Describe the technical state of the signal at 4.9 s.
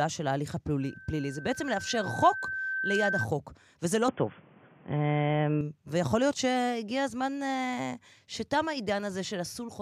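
At 4.9 s the speech sounds dull and boxy, with nothing above 3.4 kHz, a level shift of about 5 dB and a new noise floor about 35 dB down. This is likely an input switched to a poorer device, spanning 4.09 to 5.61 s with no gap.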